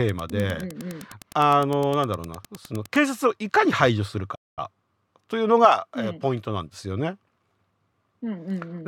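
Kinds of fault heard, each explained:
Wi-Fi interference: from 0 to 3.05 s a steady tick every 102.4 ms, about 25 dB below the speech, comes from a nearby radio's beacons rectified by the audio circuit.
playback stall: at 4.35 s the speech cuts to silence for about 220 ms, likely because the player ran short of data or was blocked, then resumes.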